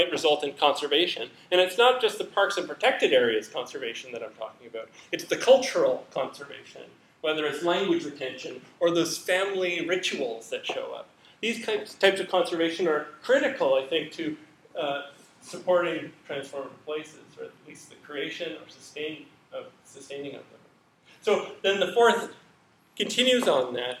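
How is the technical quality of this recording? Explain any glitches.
The recording is marred by sample clock jitter running through all of it. The converter's clock wanders, by something on the order of a microsecond or two, so each sample is captured a touch early or late at random. Where the waveform changes fastest, that timing slip becomes an amplitude error, sitting roughly 40 dB below the signal. It comes through as a grainy hiss or roughness that swells on loud, bright passages and disappears in silence.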